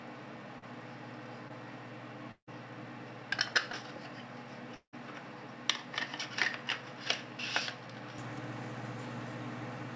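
From the start the audio has the narrow, boxy character of a lesser input, and at 8.18 s it opens up and clears with no silent gap, so the input was likely switched to a poorer device for those first 8 seconds. During that stretch the level sits about 5 dB lower, and there's a new background noise floor roughly 45 dB under the signal, the kind of self-noise a cheaper mic or a headset's call profile brings along. There are two small jumps at 0.37 s and 3.54 s, where the sound skips ahead with no silence in between. That's likely a dropped buffer (overrun): about 15 ms went missing each time because the samples weren't read before the hardware overwrote them, and the two edges were spliced straight together. Three short concealed packet losses show up as brief smears or wobbles. At 0.58–0.64 s about 40 ms never arrived and 36 ms was filled in. At 1.48–1.51 s it was 20 ms missing and 15 ms filled, and at 3.72–3.75 s 20 ms missing and 12 ms filled. 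Each time the receiver stretched the last bit of sound across the hole and then blended back into the real audio. The bigger hits are at 2.31–2.49 s and 4.75–4.95 s, and they're likely a long network dropout. About 160 ms and 180 ms were lost. The concealment carries the last sound forward as a fading buzz or hiss, there's roughly 0.1 s of silence, and then the audio resumes further on without the lost part. The call path's coding noise and high-frequency ceiling are consistent with a wideband G.722 link at 64 kbps.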